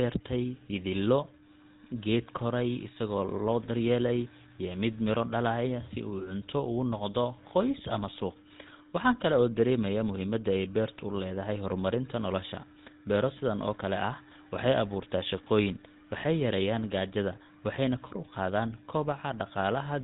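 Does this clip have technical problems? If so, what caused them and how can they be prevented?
Yes. The whole clip runs through the GSM full-rate codec, and the damage is plainly audible from start to finish. The codec models the vocal tract as a filter and drives it with a regular pulse train, keeping only every third excitation sample. That leaves the speech buzzy and gravelly. Nothing survives above about 3.8 kHz, so sibilants sound dull and clipped, and the sound fits a rate around 13 kbps. To prevent it, record or route the call over a wideband codec such as AMR-WB or Opus instead of legacy GSM.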